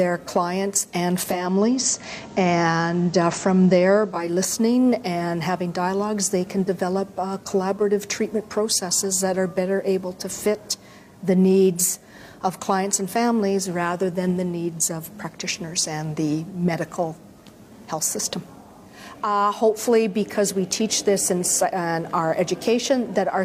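From 1.21 to 4.37 s, digital radio blending to analogue: a 418 ms cross-fade to FM brings faint hiss and a level shift of about 3 dB, unlike a dropout, where the sound stops.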